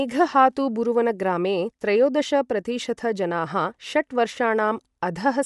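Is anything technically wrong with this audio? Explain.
Yes. Bluetooth LC3 compression, throughout: likely a low-bitrate transform codec cutting everything above 11.5 kHz and noise-filling the top, leaving the speech breathy and grainy, consistent with 10 ms frames.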